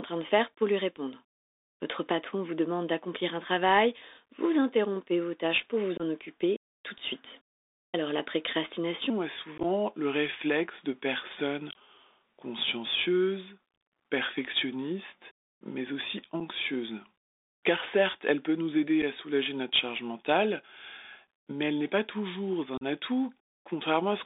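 Throughout, a Bluetooth CVSD headset codec narrows the speech to about 300 Hz to 3.7 kHz. Its 64 kbps one-bit coding adds a plainly audible grainy hiss and scratchy sibilants.

At 5.97 to 6.01 s, between "vos tâches pour vous" and "occuper tout de suite", unconcealed Bluetooth headset packet loss cuts a 22.5 ms gap. A few packets vanished, leaving an abrupt hole.

From 9.1 s to the end, a section plays at the wrong speed, at 0.82 times the original rate. Pitch drops about three semitones, and the speech turns deeper and slower. The likely cause is a wrong playback clock.

More packet loss follows. At 9.58 to 9.65 s, 30 ms of dropouts scatter over 60 ms, the longest run 15 ms. Single 7.5 ms holes open at 16.4 s and 19.02 s. At 22.77 to 22.83 s, a 37.5 ms gap chops the speech.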